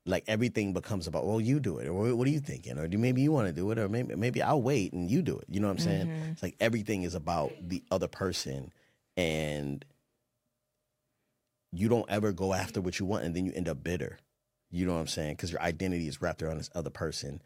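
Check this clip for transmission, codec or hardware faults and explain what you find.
One fault is present. From 7.44 to 10.09 s, just after "it's like everything is", there is crude rate conversion, consistent with a 48 kHz to 44.1 kHz change done by unfiltered nearest-sample picking. This adds inharmonic fizz roughly 25 dB below the speech.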